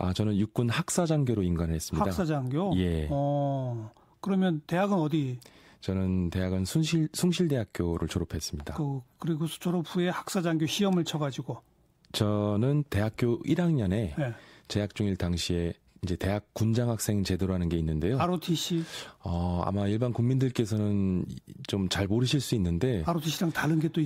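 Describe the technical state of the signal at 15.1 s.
At 15.1 s the speech signal is intact, with no audible fault at that point.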